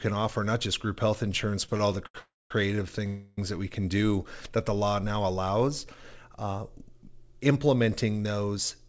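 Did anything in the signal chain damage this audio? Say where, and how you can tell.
Yes. Network and jitter buffer: repeated stalls (stutter) from 1.66 to 2.15 s, four brief gaps up to 79 ms filled by stretched sound. The speech drags, but nothing is skipped.

A call audio freeze occurs at 2.19–2.51 s and 3.07–3.38 s, each about 0.3 s. The first fades to silence and the second holds sound. Speech resumes where it stopped, likely because packets were delayed. Each is one long pause, not a stutter.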